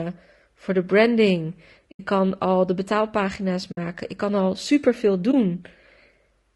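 Throughout, the speech is rough and grainy, with noise filling the gaps between harmonics and a thin, synthetic-sounding top band. That texture likely comes from low-delay AAC compression (AAC-ELD) at a low rate, near 32 kbps. It is a constant codec coloration, not background hiss.

At 1.91 s, 3.71 s and 5.31 s, AAC frame loss with muting leaves soft-edged holes of about 80 ms and 60 ms and a brief dip of about 20 ms. The decoder zeroed the missing frames, and the overlapping windows fade the sound out and back in.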